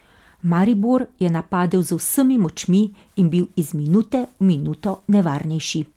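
No faults to report: the speech runs without dropouts, clicks or glitches at any point.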